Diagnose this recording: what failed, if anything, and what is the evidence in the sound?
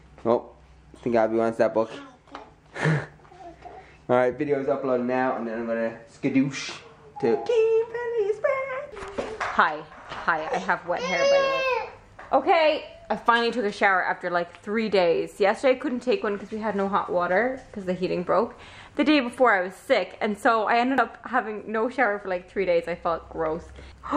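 The capture stage likely lost data to a dropped buffer (overrun): the software did not read its input in time and the converter's hardware buffer was overwritten, so a block of samples never reached the file. The sound jumps forward at 3.44 s, where roughly 40 ms is missing, and again at 20.98 s, where the gap is closer to 70 ms. There is no silence, only an abrupt splice between the two sides.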